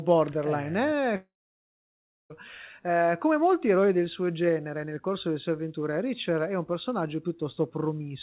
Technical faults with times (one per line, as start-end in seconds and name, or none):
1.16-2.32 long network dropout